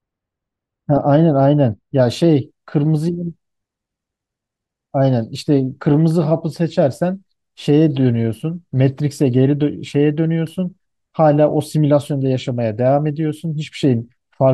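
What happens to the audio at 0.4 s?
De-emphasis applied wrongly, from 0.0 to 2.0 s: an unneeded treble cut slopes the highs down, about 14 dB at 10 kHz, muffling the speech.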